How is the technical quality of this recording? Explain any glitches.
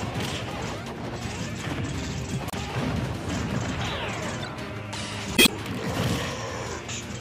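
Two short glitches interrupt the recording. Damaged data in a compressed stream, at 2.47 to 2.54 s and 5.34 to 5.49 s: corrupted bytes make the decoder misread frames and lose sync until it finds the next frame header, so each spot comes out as a brief chirp, squawk, click or short hole.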